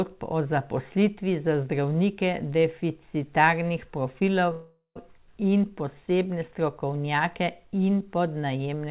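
At 4.52 s there's a call audio freeze: about 0.44 s of fill, a fading buzz ending in about 0.12 s of silence, before "in posebne strokovnjake" resumes intact, likely from delayed packets draining the jitter buffer.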